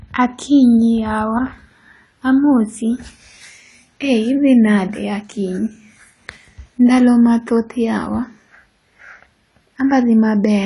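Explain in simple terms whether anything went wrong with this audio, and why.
The speech was most likely squeezed too hard by AAC compression, which throws away detail to save space. Throughout, nothing survives above about 11.4 kHz, so the sound is dull and lacks crispness, and the compression damage is plainly audible from start to finish.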